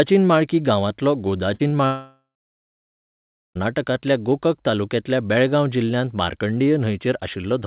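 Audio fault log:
1.54–1.61 s, burst of packet loss: The sound stops being new and turns into a held buzz or hiss for about 54 ms that fades, then picks up again slightly further along. A run of packets, about 60 ms of audio, never arrived in time. The receiver kept extending the last sound and turned it down while waiting, so that stretch is skipped. This happens against the narrowband call sound, which has nothing above 4 kHz.
1.67–1.74 s, short concealed packet loss: A brief smear, about 41 ms long, comes only a few hundredths of a second after the previous burst. It blends back into the real signal. About 40 ms of audio went missing. The receiver filled the hole by continuing the preceding sound, pitched if voiced and shaped noise if not, then crossfaded into the real audio once packets resumed.
1.86–3.57 s, long network dropout: The sound first stretches into a fading buzz or hiss. 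Then there is silence for about 1.32 s before audio returns, with the continuation running about 1.7 s in all. Roughly 1.7 s of content is gone for good. No packets arrived for that whole stretch, likely because the network connection stalled. The receiver extended the last sound until it ran out, then fell quiet until packets came back.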